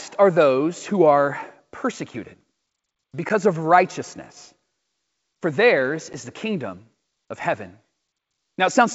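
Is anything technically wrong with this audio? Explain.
Yes. There is packet loss on an ADPCM call, heard as two brief dropouts: at 3.29–3.31 s, just before "of righteousness", and at 6.13–6.16 s, between "for theirs" and "the kingdom of heaven". Each loses about 10 ms, roughly one packet. The gap becomes silence, and the decoder's adaptive predictor and step size drift out of step with the sender's. Speech then resumes slightly distorted and settles within tens of milliseconds. On a waveform each dropout is a flat, hard-edged gap, and a spectrogram shows a thin vertical blank stripe. The G.722 wideband coding is audible as clear speech extending up to 7 kHz.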